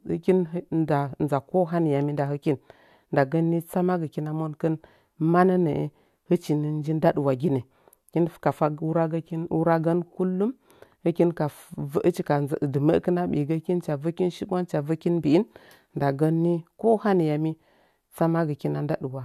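No audible technical faults.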